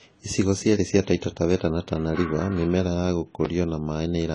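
Speech that sounds dull and smeared throughout, with nothing above 10 kHz, likely low-bitrate audio saved at a high bitrate: the cut-off and artefacts point to an earlier AAC encode around 24 kbit/s that the 192 kbit/s MP3 cannot undo. At 3.45 s a click-like tick marks a block of digital silence, about 5 ms of samples replaced by zeros, cutting in and out abruptly.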